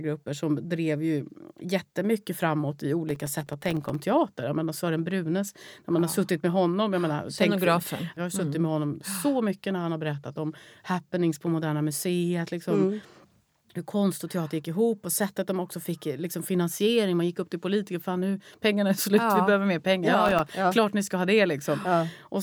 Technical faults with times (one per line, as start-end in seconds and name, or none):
3.09-3.95 processor overload crackle
20.26-20.53 processor overload crackle